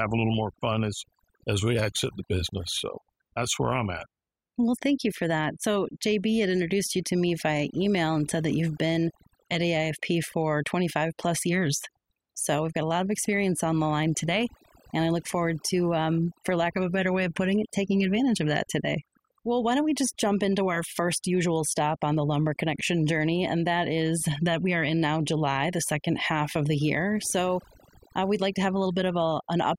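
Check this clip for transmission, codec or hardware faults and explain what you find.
Overdone noise removal runs throughout this speech clip. Bands near the noise estimate get gated off, leaving twinkling specks in near-silent gaps, unlike codec warble.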